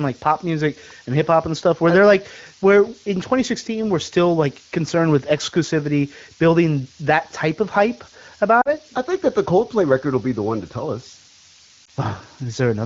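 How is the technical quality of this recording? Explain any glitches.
The recording has a high whistle and two brief speech dropouts. The speech itself comes through a wideband phone codec with only light coding damage.

Switching supply whistle: A thin whistle between 7.3 and 8.5 kHz runs throughout at roughly 10 dB below the speech. A switching power supply running in an audible burst mode or beating with another one is causing it.

Lost AMR speech frames, 8.61 to 8.69 s: About 40 ms of speech fails, which fits two corrupted frames. The decoder repeats the last good sound with falling gain, giving a quick fade to near silence.

Lost AMR speech frames, 11.85 s: A single lost 20 ms frame produces a short dip. The decoder briefly reuses old settings, so the voice comes back weak or rough for a moment before recovering.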